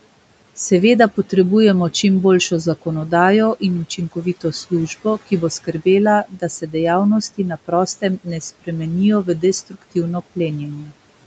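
Speech cut by the noise suppressor happens five times. The first is 3.6 to 4.72 s, after "potrebujemo čim boljšo zakonodajo" and before "ki bo". Then come 6.25 to 6.74 s, 7.38 to 8.69 s, 9.24 to 9.96 s and 10.82 to 10.93 s. The suppressor took quiet speech for noise. Brief parts, a fifth of a second or less each, drop by about 11 to 17 dB. They sound swallowed.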